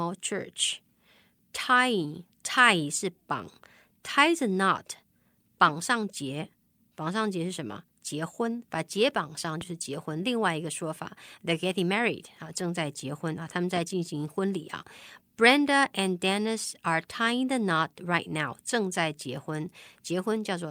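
It's a speech clip with two loud pops, one at 9.61 to 9.65 s just after "把结绑上" and another at 13.76 to 13.80 s after "婚啊他们", each a single sharp hit well above the speech, which carries on underneath. That's likely a voltage spike from a plug, switch or static.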